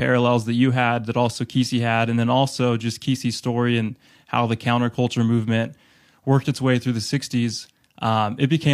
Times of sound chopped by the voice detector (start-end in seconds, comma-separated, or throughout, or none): none